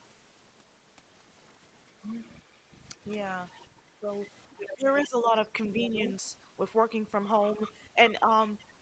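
Background gated by the echo canceller, 2.59 to 2.7 s: the canceller clamped the microphone while its loudspeaker was active, so the room sound dips by about 8 dB for roughly a tenth of a second, then recovers as the gate releases.

Other side's voice leaking through, 3.51 to 5.02 s: a faint second voice sits about 20 dB under the talker, likely far-end loudspeaker sound the echo canceller failed to fully subtract from the microphone. It returns from 5.64 to 6.1 s, stronger at about 15 dB below.

Speech suppressed in double talk, 4.01 to 5.34 s: with both sides speaking over that leak, the talker's voice ducks and breaks up for roughly 0.7 s in total, dropping by around 15 dB at worst, likely because the canceller couldn't separate near speech from echo and attenuated both.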